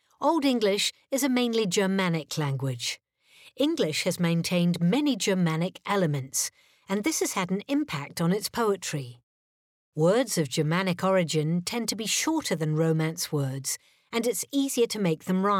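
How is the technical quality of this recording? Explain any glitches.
No dropouts, clicks, distortion or other glitches are audible at any point in the recording.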